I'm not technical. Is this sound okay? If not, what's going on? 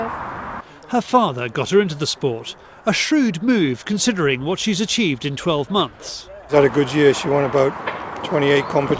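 Yes, the sound is technically in good shape, with nothing going wrong in how it was recorded or carried along the way.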